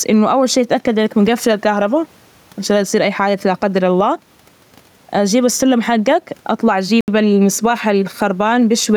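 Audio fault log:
Throughout: gain pumping. The swing is around 10 dB. The room noise itself sits about 43 dB below the speech. The likely cause is input gain set far too high, with a fast limiter or compressor clamping down on each loud syllable and releasing in the gaps. That narrows the distance between loud and quiet passages and leaves the speech sounding squashed.
7.01–7.08 s: Bluetooth stall. Right after "جيب السلم حجك أطلع", playback drops to complete silence for 72 ms, then resumes. The likely cause is radio interference delaying packets to the headphones. Their receive buffer emptied, and output paused until the retransmitted packets came in. The silence is the gap where no audio data was available to play.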